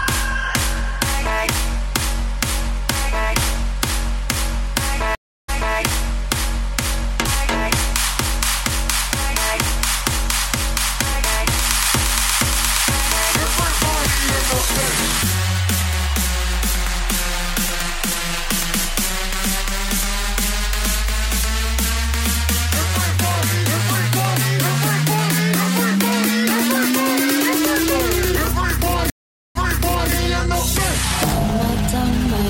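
At 5.15 s and again at 29.10 s there is a stream reconnect: the connection dropped, the player went quiet, then reopened the stream with a fresh decoder. The first gap is about 333 ms, after which playback resumes 277 ms earlier than where it stopped. The second is longer, about 453 ms of silence, and rewinds by 555 ms. Each is heard as a hard dropout followed by a short stretch of sound repeating.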